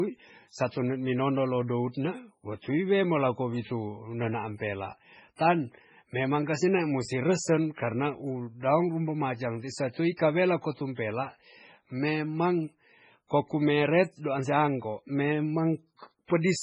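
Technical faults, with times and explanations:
Throughout: MP3 compression, heavy and likely from a very low bitrate around 16 kbps. Nothing survives above 10.3 kHz, and weak frequency lines flicker in and out between frames, so the sound turns watery and swirly. A spectrogram shows a hard ceiling at 10.3 kHz with patchy, blocky gaps beneath it.
10.17–10.19 s and 16.26–16.30 s: pre-echo. Before each sharp attack, quantisation noise spread across its transform block leaks into the quiet gap ahead, for 26 ms and then 43 ms, so a short hiss precedes the onset and the attack sounds smeared. The waveform shows a spread of noise before each transient.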